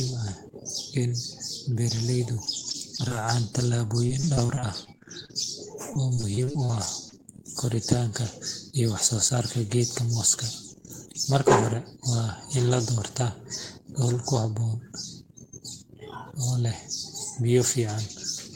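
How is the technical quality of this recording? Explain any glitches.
The recording has clear network glitches in its first half.

From 2.45 to 3.27 s, 4.06 to 5.30 s, and 5.94 to 7.14 s there is repeated packet loss, which gives a robotic sound. Short gaps of up to about 30 ms get patched with repeated sound, leaving choppy speech with pieces missing.

From 6.59 to 7.35 s a jitter buffer slow-down adds about 63 ms. Repeated pitch periods drag the speech to 93% speed at the same pitch.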